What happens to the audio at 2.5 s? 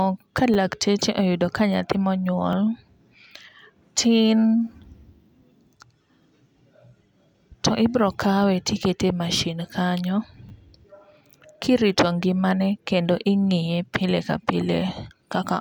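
At 2.53 s a repeated buffer fault occurs: fresh audio failed to reach the output device in time, so it replayed the 10 ms buffer it already held, sounding that slice of speech twice in a row. Because the repeated piece is so short and each joint is a hard edge, it comes across as a brief click or tiny buzz rather than an audible stutter, and essentially none of the speech that follows is lost.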